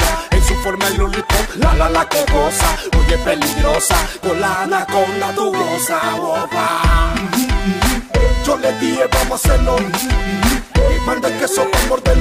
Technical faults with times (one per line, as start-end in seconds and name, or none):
none